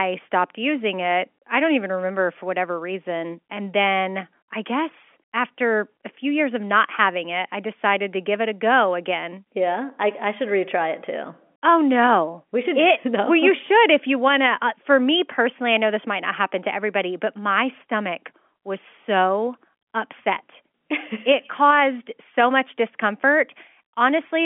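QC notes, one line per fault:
No faults found; the speech sits within a telephone band of about 250 Hz to 3.4 kHz, consistent with G.711 telephone coding.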